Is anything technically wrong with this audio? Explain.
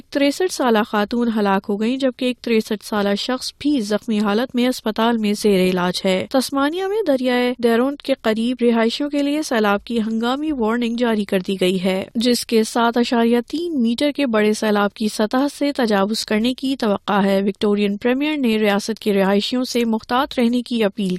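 No, nothing technically wrong can be heard here.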